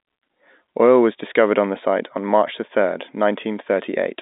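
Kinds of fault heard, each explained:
No faults can be heard in this speech clip. It arrives through G.711 telephone coding, so the sound is held to the narrow phone band of roughly 200 Hz to 3.7 kHz, with nothing above about 3.8 kHz.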